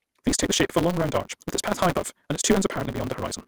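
A speech clip with a truncated block size mismatch throughout: a steady 188 Hz buzz and sound running 1.88 times too fast. One stage writes longer blocks than the next reads, and each block's tail is discarded, which fits the reading stage taking 256-sample blocks. Overlap between stream segments produces brief clicks or skips at 0.30 s (just before "take the shape of"), 0.83 s (just after "the shape of a"), 1.90, 2.43 and 2.96 s. Overlapping time stamps on the one-second segments make the player trim a few milliseconds that were never duplicated, so the waveform jumps at each boundary.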